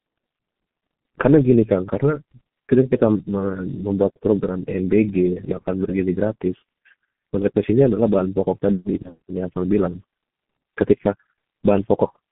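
A speech recording, carried throughout by the G.723.1 codec at a very low rate of about 6.3 kbit/s. The sound is muffled and hoarse, and consonants smear into one another because the codec rebuilds the voice from a coarse model that it updates only every 30 ms. On a spectrogram, energy sits in a band from roughly 150 Hz to 3.4 kHz with nothing above, and harmonics look blotchy and quantised rather than continuous. From about 9.02 to 9.18 s there is VoIP packet loss concealed by the speech codec. The gap fits a single lost 30 ms frame. The decoder filled it by repeating its last pitch and spectral shape at falling gain, so a brief buzzy tone or coloured noise that fades replaces the speech, and the voice stays weak and distorted until roughly 9.18 s while the decoder recovers. The waveform shows a shrinking envelope there.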